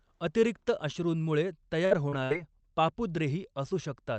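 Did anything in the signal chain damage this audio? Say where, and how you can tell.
Yes, the damage happened on the network side of a WebRTC call path. The Opus codec's band limit near 8 kHz is audible, but that is the codec working as configured. There are two bursts of packet loss, at 1.85 to 1.93 s and 2.24 to 2.32 s. In each one, the receiver stretches the last sound for about 53 ms and then about 62 ms, fading it down. Playback then resumes roughly 60 ms further into the speech, so that stretch is simply absent.

Short concealed packet loss occurs at 2.09 to 2.14 s, between the two bursts. About 35 ms of audio is synthesised from the preceding signal and blended back into the real stream, and about 40 ms of the original never plays. It sounds like a brief smear or wobble rather than a dropout, because the concealment bridges the hole smoothly. Short events like this can swallow a consonant.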